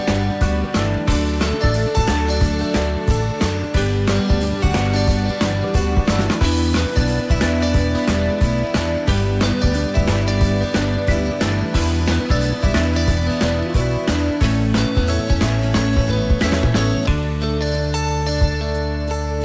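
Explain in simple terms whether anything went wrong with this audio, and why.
Nothing went wrong here; the sound simply came through an ordinary internet call, which is why there's nothing above about 8 kHz, just what you'd expect from a wideband call codec doing its normal job.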